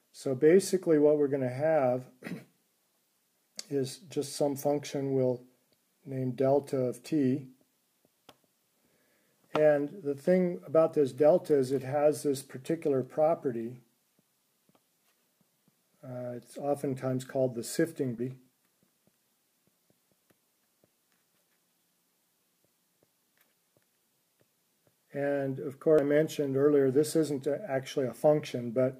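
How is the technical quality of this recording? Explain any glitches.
Two short glitches mar the recording, at 18.18 s and 25.99 s. Each is a brief blip from damaged data in a compressed stream: corrupted bytes made the decoder misread frames, lose sync and hunt for the next valid frame header.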